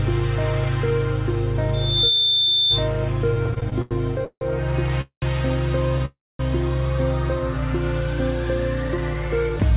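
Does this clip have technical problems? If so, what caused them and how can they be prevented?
Yes. At 1.73 s a thin tone around 3.6 kHz swells over roughly 0.4 s into a loudspeaker feedback squeal, sitting about 5 dB above the rest of the sound until it stops at 2.89 s. A microphone was picking up the loudspeaker it fed, and at that frequency the loop gain passed one, so the tone kept feeding itself. Lowering loudspeaker gain, moving the microphone away or using headphones, and notching 3.6 kHz would prevent it.

Between 3.34 and 4.43 s the audio drags and stutters: eight repeated stalls (stutter), the longest about 164 ms, where the last sound is held and stretched before playback resumes. Roughly a third of that second is filler, about 350 ms in all, yet nothing is lost. Packets kept arriving late, so the jitter buffer ran dry again and again. A steadier network path or a deeper adaptive jitter buffer would prevent it.

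Two call audio freezes follow. From 5.01 to 5.24 s the last sound buzzes on and fades into about 100 ms of silence, and from 6.05 to 6.41 s it does the same with about 230 ms of silence. Each pushes the rest of the audio later, by about 210 ms and 340 ms, without dropping anything. The likely cause is packets held up in transit, emptying the jitter buffer. A more stable connection with fewer delay spikes would prevent these.

From 8.88 s to the end at 9.76 s the audio sounds hurried, running about 10% fast at unchanged pitch. This is a jitter buffer speed-up: the buffer held more than its target, so the receiver trimmed short pitch-period slices, about 0.1 s in total, to catch up. Avoiding the delay bursts that overfill the buffer would prevent it. Throughout, nothing above 4 kHz gets through, which fits a narrowband call codec such as G.711.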